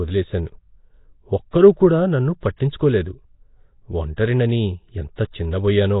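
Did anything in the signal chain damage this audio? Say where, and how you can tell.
Yes. The damage happened at the codec stage, and it runs through all of this speech. Nothing is left above 3.8 kHz, and the whole signal has a rough, hissy halo and a smeared, underwater quality. That points most likely to Nellymoser compression at a low rate, around 16 kbps. Each block gets a fixed, small bit budget. Quieter bands lose their bits entirely and are replaced with noise, so the coding damage here is heavy.

Pre-echo, from the same codec, comes just before sharp onsets at 1.51–1.53 s (22 ms), 2.57–2.60 s (35 ms), 4.17 s (15 ms) and 5.16–5.18 s (23 ms). A short hiss leads each attack, and the attack itself sounds softened. The codec spreads quantisation noise across a whole transform block. When a sharp onset lands late in a block, noise scaled to that loud moment also fills the quiet stretch before it.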